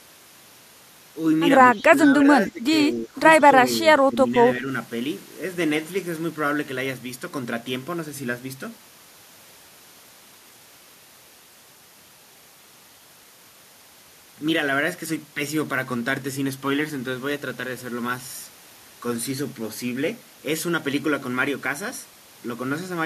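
From 1.74 to 1.83 s a very faint copy of the speech trails the original by 150 ms: an echo leak, likely from a far-end loudspeaker whose echo canceller let part of its microphone pickup return down the line.

The speech then dips and thins in patches at 1.76 to 2.65 s, 2.87 to 3.15 s and 3.45 to 4.35 s, by roughly 10 dB, with a shallower dip at 4.58 to 4.68 s. This is speech suppressed in double talk, likely because the canceller, hearing both sides together, turned the talker down along with the echo.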